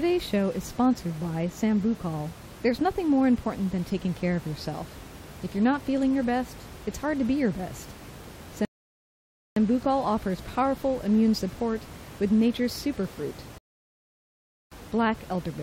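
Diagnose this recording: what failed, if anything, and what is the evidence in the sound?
Playback rebuffering stall: the speech falls silent at 8.65 s for 0.91 s and at 13.58 s for 1.13 s, then resumes exactly where it stopped. Nothing is skipped, unlike a network dropout.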